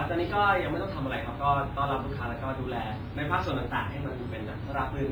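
From start to finish the speech has been through a transform codec pushed well below what it needs, most likely WMA compression from the early WMA 1 encoder, at a rate that fits roughly 24 kbps. Long transform blocks smear quantisation noise across tens of milliseconds, and weak spectral lines are zeroed out. The damage is heavy: syllables ring and wash together, detail drops out, and a hiss swells and fades with the voice.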